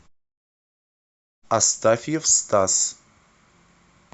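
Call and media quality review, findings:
No findings in this call and media quality review: the speech clip shows no faults.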